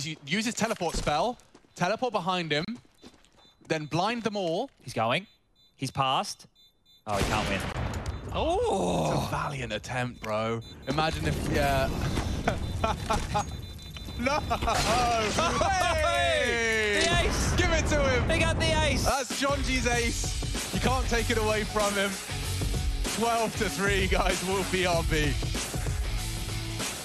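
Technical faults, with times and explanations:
2.65 to 2.68 s and 7.73 to 7.75 s, gap at a join of encoded pieces: the sound just drops out for about 32 ms, then about 21 ms, and picks up right where it left off. It looks like the audio was encoded in separate chunks and butted together untrimmed, so each piece's encoder start-up silence and padded last frame stayed in. The edges are smeared by the codec, so the silent part is shorter than the full gap.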